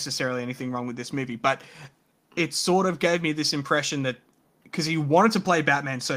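No technical faults can be heard in the speech at any point.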